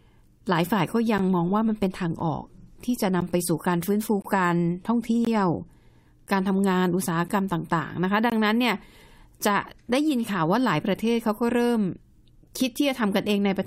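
The clip is speech with gaps between stream segments: short hard-edged silences, roughly 8 to 23 ms long, at 1.18, 2.20, 3.21, 4.22–4.25, 5.25–5.27, 6.27, 7.28 and 8.30–8.32 s. Segment timestamps leave small holes at each 1 s boundary, which the player fills with silence. No audio is lost.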